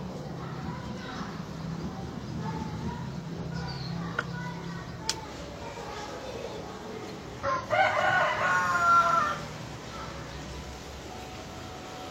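At 0.89, 3.35, 7.43 and 11.66 s, compressed frames are skipped: roughly a tenth of a second of audio, about 0.15 s at 7.43 s, goes missing, so the audio jumps ahead at each point.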